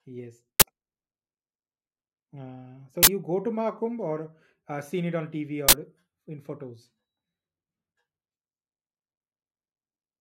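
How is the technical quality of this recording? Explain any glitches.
The speech is marred by three harsh bursts of loud digital noise, at 0.60–0.62 s, 3.03–3.07 s just before "go to", and 5.69–5.73 s just before "in photos". These are uninitialised buffer glitches: playback read a block before audio was written to it, so leftover memory came out as samples. The bursts last about 21 ms and 43 ms, which fits 1024- and 2048-sample buffers.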